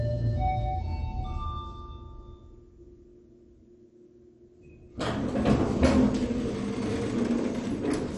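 Throughout the clip the sound is dull, with nothing above 11.3 kHz. A gurgling, granular roughness sits on everything. This is likely MP2 compression at a low rate, around 48 kbps. Starved of bits, upper sub-bands drop out and the remaining bands are coarsely quantised.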